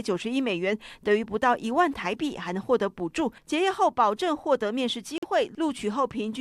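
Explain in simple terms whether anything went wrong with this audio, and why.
At 5.18 s the sound cuts out for about 70 ms, then resumes as if it had played on. This is likely a Bluetooth dropout, with a couple of packets arriving too late.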